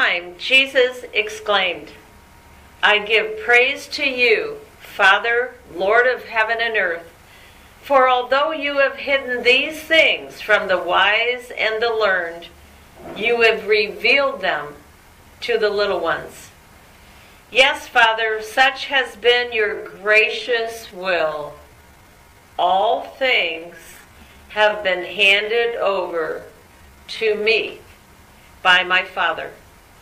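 From 19.61 s to 27.45 s the pace abruptly slows to about 0.69 times, dragging at unchanged pitch: likely a time-stretched section, padded with repeated short pieces.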